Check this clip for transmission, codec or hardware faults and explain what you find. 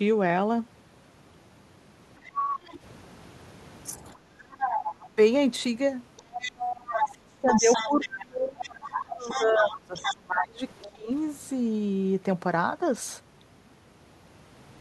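The clip has three echo-canceller faults, all in this speech.

Other side's voice leaking through, at 2.25–2.78 s, 3.84–5.09 s and 6.17–10.17 s, about 5 dB below the talker, then faintly at 10.81–10.89 s. Loudspeaker echo likely escaped cancellation.

Background gated by the echo canceller, at 4.16–4.52 s. The room sound dips by about 9 dB while the loudspeaker plays, then returns.

Speech suppressed in double talk, at 5.09–5.18 s and 6.32–11.11 s. The talker's voice drops by about 25 dB, likely because the canceller turned both overlapping voices down.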